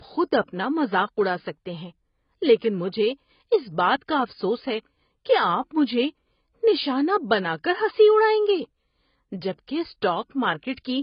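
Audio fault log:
throughout AAC compression, likely from AAC-LC: the speech is dull and smeared, with a warbling, fizzy texture on sibilants. Nothing remains above 5.1 kHz, which fits a bitrate around 16 kbps. A spectrogram shows a flat ceiling at 5.1 kHz.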